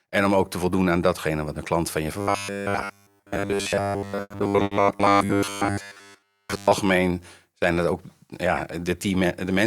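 From 2.21 to 6.73 s the speech turns into a rigid, metallic buzz near 100 Hz that still roughly tracks the words. This is robotic sound from repeated short buffers, likely from audio arriving too seldom, so most of that stretch is filled by looping roughly 10 ms chunks while real audio is skipped.

Within that span, two sounds hang on too long, at 4.21 to 4.32 s and 4.64 to 4.73 s, each with a slight buzz or dip. Each is a short stall from a late packet: the jitter buffer ran dry, the last sound was stretched for 90 ms and then 70 ms, and playback resumed where it left off, adding that much delay but losing nothing.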